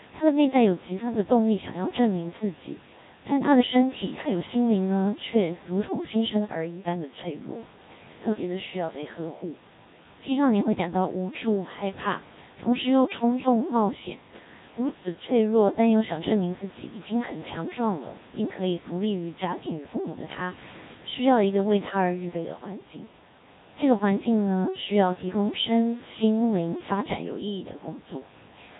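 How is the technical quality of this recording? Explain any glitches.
Poor: the whole recording has passed through a Codec 2 vocoder, which makes the speech robotic and buzzy throughout.

From start to finish, the decoder rebuilds the speech from sine waves driven by a small set of parameters: pitch, voicing, energy and spectral envelope. The original waveform is discarded. The damage is heavy, which fits a rate around 1.3 kbit/s. On a spectrogram, the harmonics look unnaturally regular, and nothing appears above 3.8 kHz. The waveform looks synthetic. The room's background noise, about 23 dB below the speech, comes through the codec mangled.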